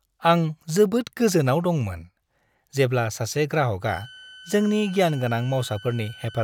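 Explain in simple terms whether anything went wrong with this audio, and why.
A switching supply whistle comes in at 3.87 s and lasts until the end of the clip. It is a thin, steady high tone of about 1.5 kHz, wandering only slightly, sitting under the speech and quieter than it. A switching power supply has slipped into an on-off pattern slow enough for the ear to catch, and that pulsing leaks into the audio as a whistle.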